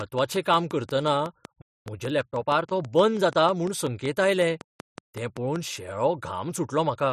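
A train of clicks runs through this speech recording from 0.01 to 5.57 s: about 30 regular ticks at 5.4 per second, peaking roughly 10 dB above the signal, likely from electrical interference. A playback stall silences the speech from 1.62 to 1.86 s, a 246 ms gap, as the player probably ran dry or was blocked. Time-compressed catch-up follows from 1.86 to 3.48 s, when the player trims its backlog by splicing out short pieces, so the speech hurries at 1.15 times normal speed with unchanged pitch.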